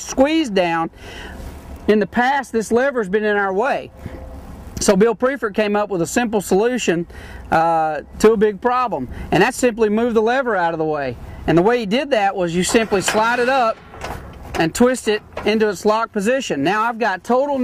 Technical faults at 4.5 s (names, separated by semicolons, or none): none